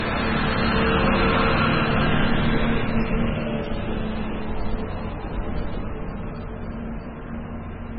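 Low-bitrate audio saved at a high bitrate runs throughout the clip. Nothing sounds above about 5.4 kHz, so the top end is dull and closed-in, and the smeared, watery artefacts of heavy compression are audible. The likely cause is an MP3 first encoded at a very low bitrate, around 16 kbit/s, then re-encoded at a much higher one, around 256 kbit/s. The larger second file cannot restore what the first encoding stripped out.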